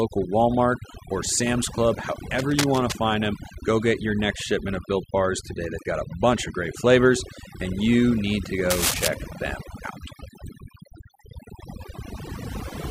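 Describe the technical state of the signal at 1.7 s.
At 1.7 s the speech is affected by overdone noise removal, which runs through the whole clip rather than starting or stopping there. A noise reduction stage set too aggressively is shutting individual frequency bands down whenever they sit close to its noise estimate, taking the quieter parts of the voice along with the noise. The gaps between sounds fall to near silence dotted with twinkling specks. That sparkling, band-by-band behaviour sets it apart from a plain noise gate, which cuts the whole signal at once.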